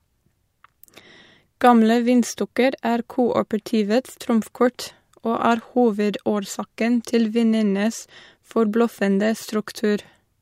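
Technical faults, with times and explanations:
Nothing to report; no technical faults found in this speech recording.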